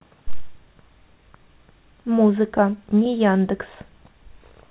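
Speech over a call line; no faults heard.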